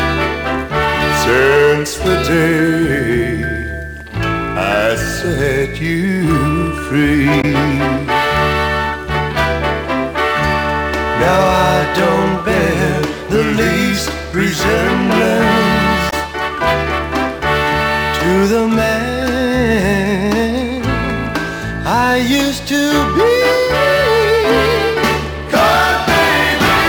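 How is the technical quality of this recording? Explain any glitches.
Two short glitches come from damaged data in a compressed stream, at 7.38 to 7.45 s and again at 16.07 to 16.13 s. Corrupted bytes make the decoder misread frames and lose sync, so each produces a brief chirp or squawk. On a spectrogram each shows as a 64 ms smear of disordered energy, with a visible break in the waveform.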